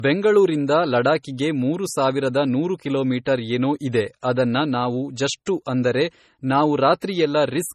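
From start to finish the speech has a dull, smeared top end, with the swirly, watery artefacts of heavy compression and nothing at all above 14.4 kHz. This is low-bitrate audio saved at a high bitrate. The sound likely passed through a low-bitrate MP3 encoder, something near 32 kbit/s, and was then re-encoded as a much larger MP3. The second pass can't bring back the detail the first one stripped away.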